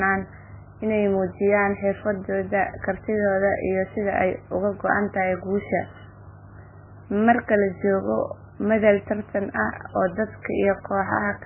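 All the way through, the speech is dull and watery, with nothing above 3 kHz and a swirly, metallic chirping on s sounds. That's likely heavy MP3 compression at a starved bitrate, near 10 kbps, where the encoder chops the treble and flickers weak frequency lines on and off.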